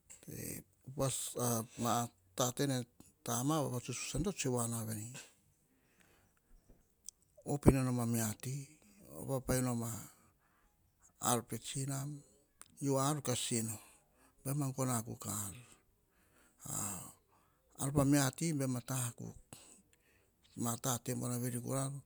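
No technical faults are audible anywhere in the recording.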